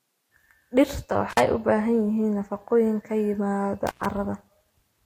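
From the start, the speech carries mixed smeary, swirling compression artefacts with nothing above 16.7 kHz, likely transcoding between lossy codecs, consistent with MP3 then Vorbis.

At 1.30 to 1.40 s the sound cuts out for 42 ms with crackle at both edges, and again at 3.87 to 4.06 s, just after "ka yimaada", for about 105 ms. Both are intermittent contact, a loose plug or cable briefly opening the line.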